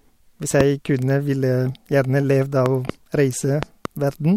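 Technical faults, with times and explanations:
0.61–0.63 s, loud pop: a single sharp pop, about 15 dB above the speech, just before "kunne ville". A voltage spike, likely from a switch or static discharge, lands on the signal. Unlike a dropout, the speech carries on underneath.
2.66–2.92 s, loud pop: two pops in quick succession, about 10 dB above the speech, likely a plug or driver glitch producing a pulse and its release.
3.63–3.87 s, loud pop: another double pop, about 15 dB up, likely the same kind of electrical transient, with the speech continuing underneath.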